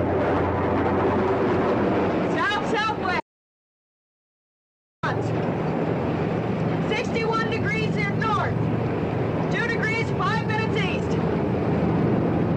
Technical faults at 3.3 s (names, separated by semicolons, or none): audio dropout to silence